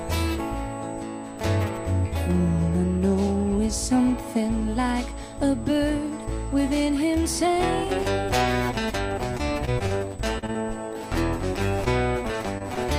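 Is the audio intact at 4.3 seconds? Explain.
No, USB whine runs through the whole clip, including 4.3 s: a steady 8 kHz tone, roughly 30 dB below the signal, from 125-microsecond bus microframes leaking through power or ground.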